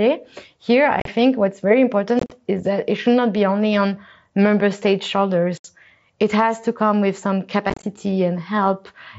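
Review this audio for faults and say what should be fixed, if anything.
Unconcealed Bluetooth headset packet loss at 1.0–1.08, 2.19–2.32, 5.58–5.65 and 7.70–7.84 s: dropped mSBC packets become silence, leaving abrupt gaps that chop the speech. Fix it by reducing radio interference and distance to the phone, and by enabling packet loss concealment in the receiving stack.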